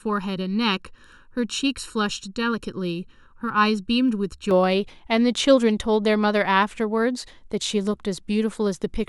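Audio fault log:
0.0–4.51 s, channel delay (comb filtering): one channel arrives just under a millisecond late, and summing to mono cancels shared content at evenly spaced frequencies starting around 700 Hz, so the speech sounds hollow and phasey with fixed notches across the spectrum.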